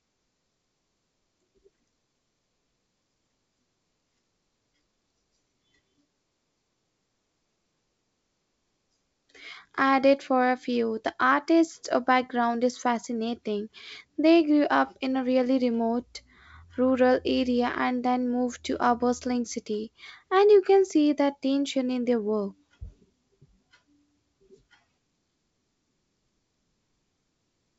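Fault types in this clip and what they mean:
No faults can be heard anywhere in this recording.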